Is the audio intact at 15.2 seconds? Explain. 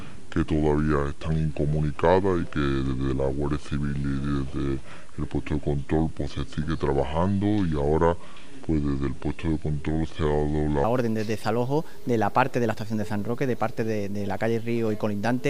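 Yes, the audio is intact at 15.2 seconds, with no dropout, click, distortion or other fault audible at that moment.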